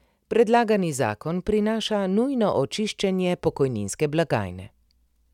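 No technical faults can be heard in this recording.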